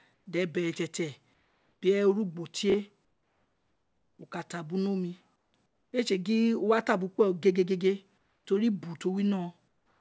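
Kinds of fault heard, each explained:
Comfort noise in place of the background: In the pauses, the real room sound drops out. A steady, featureless hiss stands in for it, about 2 to 6 dB quieter. This happens at 0.14, 1.34, 3.05, 5.36, 5.66, 8.18 and 9.68 s. Each stretch lasts from 0.12 s up to 1.14 s, the longest at 3.05 s. The likely cause is discontinuous transmission, with the receiver filling each gap with synthetic noise shaped roughly like the background.
Chunks out of order: At 2.70 s, a 20 ms piece of audio plays one slot late, after the piece that should follow it. Nothing is missing, but the sequence is swapped. The result is a brief garbled blip with three hard joins. It is over by 2.74 s. The audio around it sits in a band with nothing above 8 kHz, which fits a wideband call codec.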